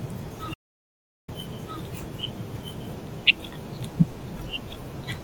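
Across the whole clip the speech is heard twice, with a second copy trailing about one and a half seconds behind at roughly the same loudness, clean and dry with no room colour. This doubled audio track is likely the same signal captured again through a slower path, or an edit holding two copies out of step.

From 0.54 s to 1.28 s the sound cuts out abruptly into dead, complete silence with no room tone, then resumes mid-flow, losing about 0.74 s of speech. This audio dropout to silence likely comes from input lost through a disconnected device, failed link or stray mute while silence kept being written.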